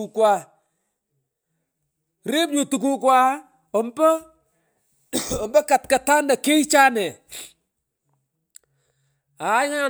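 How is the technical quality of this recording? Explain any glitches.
I can't hear any glitches in this recording.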